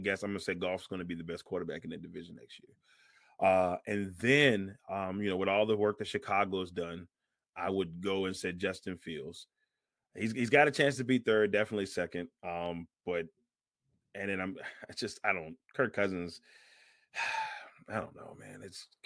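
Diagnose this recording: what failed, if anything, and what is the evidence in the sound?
Nothing failed; no faults heard.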